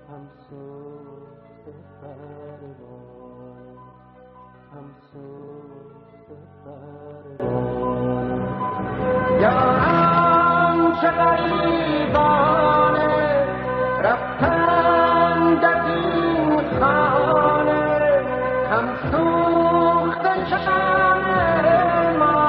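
For the first 7.4 s, from 0 to about 7.4 s, the sound is faint. The centred, common content has nearly disappeared and the level is down by about 19 dB, leaving only a faint residue. That points to one channel inverted, most likely one stereo channel with reversed polarity cancelling against the other in a mono sum. Unlike a plain volume drop, the loss is uneven: what the two sides share vanishes while their differences survive, and full body returns abruptly once the inversion ends. Frames out of order also appear as four short garbled flutters, at 5.38 to 5.49 s, 11.37 to 11.51 s, 13.02 to 13.22 s and 20.48 to 20.67 s. In each, a brief stretch plays with its two halves exchanged, in blocks of 46.4, 69.7 and 92.9 ms (the last two at 92.9 ms). This fits swapped runs of two, three and four codec frames. Unlike a dropout or skip, nothing is missing and the timing afterward stays intact.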